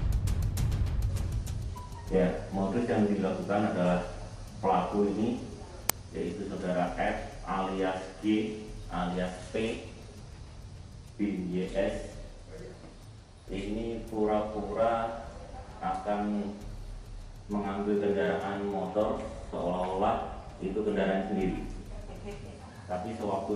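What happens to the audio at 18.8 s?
Nothing goes wrong at 18.8 s: the audio plays through that moment intact, with no audible fault.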